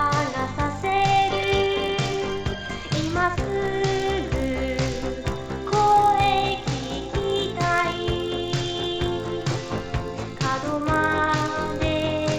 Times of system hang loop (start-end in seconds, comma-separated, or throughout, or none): none